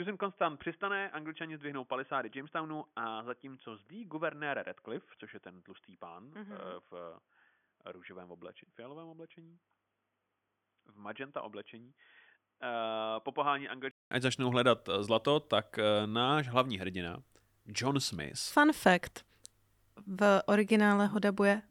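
Input switched to a poorer device, 0.0 to 14.11 s: the speech sounds dull and quieter, with nothing above 3.4 kHz, likely from a narrowband microphone, and a 200 ms silence at the switch.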